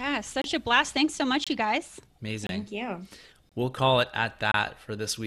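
Gaps between chunks occur at 0.42–0.44 s, 1.44–1.47 s, 2.47–2.49 s, 3.49–3.52 s and 4.52–4.54 s. The speech arrives in 1-second chunks, and each join has about 25 ms of added silence. Playback pauses at every join but no audio is lost, so the timeline stretches slightly. Each gap sounds like a short, hard-edged hole in the speech, repeating at a steady rhythm of about one per second.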